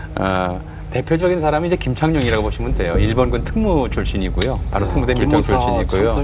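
No technical faults can be heard anywhere in the audio.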